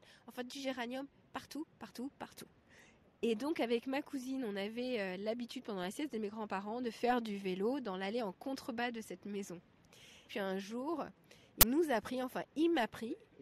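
At 11.61 s the sound breaks into a sudden, loud crack. It stops at 11.63 s, so it lasts 20 ms. This is an uninitialised buffer. A block of audio was sent to the output before any samples had been written into it. Whatever data was left in that memory got played as if it were sound. The result is harsh and unrelated to the material around it, a brief crack.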